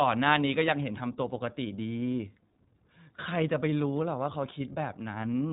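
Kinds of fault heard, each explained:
iLBC codec: The speech has been coded with iLBC, a narrowband VoIP codec. Nothing above 4 kHz gets through, so the sound is dull and the sharp hiss of s and f sounds is lost. Each short frame is coded on its own, without using the frame before. The coding damage is plainly audible from start to end. The speech sounds slightly rough and synthetic. This character fits iLBC's 20 ms frame mode at 15.2 kbps.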